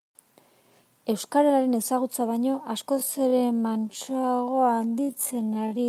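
Speech, and from 2.89 s right through to the end there's a time-stretched section: the pace suddenly drops to about 0.52x, roughly half speed, while the pitch holds steady, so it drags. That's likely software padding the audio to fill a length by repeating short slices.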